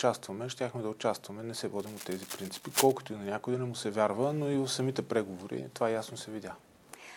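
A worn cable, connector or control carrying a DC voltage was likely disturbed between 1.79 and 2.92 s, its contact resistance jumping about as it moved. That adds dense, irregular bursts of noise on top of the sound, heard as cable scratch noise: a stretch of scratching and rustling lasting a little over a second, sitting only around 5 dB below the audio itself. Later, at 5.58 to 5.60 s, a single compressed frame arrived with corrupted bits and the decoder played it anyway. Misread gains or codes put energy at the wrong frequencies for the length of that frame, producing a corrupt frame decoded artefact: a brief glitch of wrong content lasting about 24 ms. Its error energy peaks at roughly -40 dBFS.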